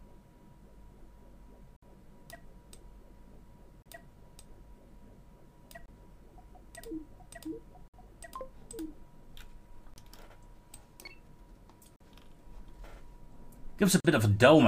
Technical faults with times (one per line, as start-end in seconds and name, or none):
1.76-1.83 gap between stream segments
3.82-3.86 gap between stream segments
5.86-5.88 gap between stream segments
7.88-7.94 gap between stream segments
9.94-9.96 gap between stream segments
11.96-12.00 gap between stream segments
14.00-14.05 gap between stream segments